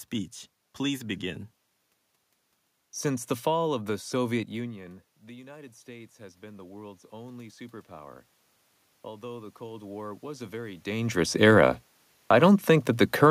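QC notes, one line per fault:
4.56–8.30 s and 9.02–11.31 s, automatic gain rising: after the talker moves back and the input falls by about 19 dB, the gain control ramps up by about 7 dB, then about 6 dB. Voice and room noise swell together, visible as a slowly widening waveform envelope and a brightening noise floor across all frequencies.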